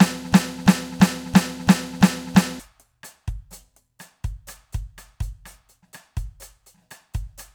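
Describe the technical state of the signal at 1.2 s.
At 1.2 s the music is caught in a broken-record loop: a fragment of about 0.34 s repeats exactly, back to back, already under way when the clip opens and lasting until 2.60 s. This likely comes from a stalled player or stream resending its last buffered fragment, so the intended audio is lost.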